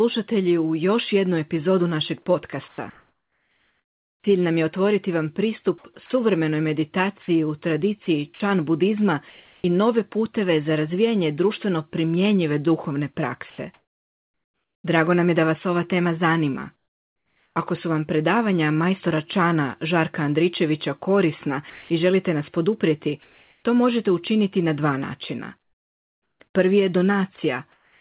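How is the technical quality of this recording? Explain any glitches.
The recording is choppy in three stretches and band-limited to telephone quality, with nothing above 4 kHz, which fits G.711 mu-law at 64 kbps.

Sound chopped by the voice detector occurs at 2.68–9.64 s (between "još jednu epizodu našeg" and "i nove puteve za"), at 13.5–17.56 s (between "razvijanje društveno primjenjive duhovne" and "su vam predavanja majstora"), and from 21.7 s to the end. The likely cause is the sender's voice detector repeatedly gating transmission, which replaced about 1.7 to 2 s of each stretch with comfort noise. As a result, the speech breaks up.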